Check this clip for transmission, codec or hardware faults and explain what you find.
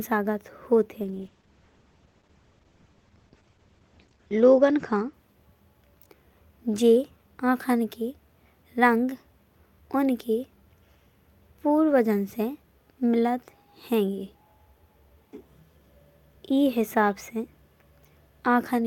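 There is one fault. From 1.04 to 5.77 s, a call bitrate drop starves the encoder, consistent with about 40 falling to 10 kbps. Coarser coding makes the speech rough and muffled, and a spectrogram shows content up to 20 kHz cut off at 8 kHz.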